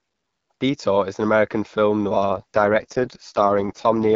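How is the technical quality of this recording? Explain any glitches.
The recording has one glitch, an AMR rate drop in the second half of the speech.

From 2.15 s to the end, the network pushes the AMR wideband codec to a lower rate, which sounds like a fall from about 12.65 to 6.6 kbit/s. Fewer bits describe the speech, so it turns rough and synthetic without losing bandwidth. Before 2.15 s, only light coding wear is audible.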